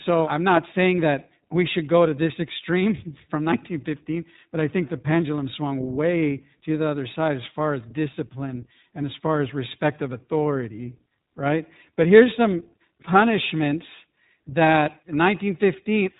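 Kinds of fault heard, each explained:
iLBC codec: narrowband VoIP coding that handles each short frame independently. The speech is plainly rough and slightly synthetic. A spectrogram shows a hard ceiling at 4 kHz with blocky texture below it, consistent with 20 ms frames at a 15.2 kbps mode.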